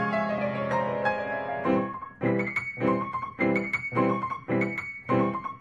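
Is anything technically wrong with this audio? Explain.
Yes. At 0.37 s, compressed frames are skipped: about one frame's worth of audio, roughly 20 ms, is never played because the decoder lacked or rejected it. The sound jumps forward.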